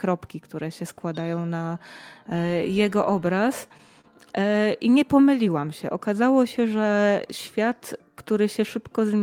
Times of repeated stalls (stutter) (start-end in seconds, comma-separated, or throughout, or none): 3.35-4.06